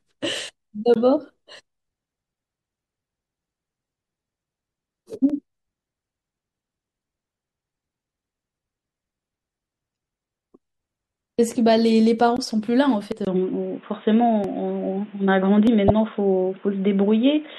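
The whole recording carries a watery, swirling treble and smeared consonant attacks, likely from MP3 compression at a low rate consistent with about 64 kbps. Starved of bits, the encoder truncates the top band and lets weak spectral lines flicker between frames, so the damage stays plainly audible throughout the speech.

At 0.49 s the first dropped buffer (overrun) appears. The likely cause is the application failing to read its samples before the hardware overwrote them, so the audio splices straight across the gap. Each is a jump forward, repeating at 5.99, 9.20, 13.12, 14.44 and 15.67 s and losing roughly 20 to 70 ms each time.

Short glitches at 0.94, 5.30, 9.93, 12.37 and 15.88 s, each lasting up to about 50 ms, are damaged data in a compressed stream. Corrupt bytes make the decoder misread frames and hunt for the next valid header, which produces a brief blip.

From 13.25 s the input has likely switched to a poorer device. 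After a 20 ms dropout the speech turns dull and boxy, with a new noise floor about 35 dB down. The level barely changes.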